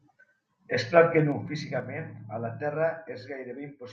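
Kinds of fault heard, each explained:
Zipper noise: the gain is lowered in unsmoothed 3 dB jumps instead of a continuous ramp, about seven per second, and each jump leaves a small click. Between 1.24 and 1.84 s, a drop of roughly 10 dB ticks audibly across the speech.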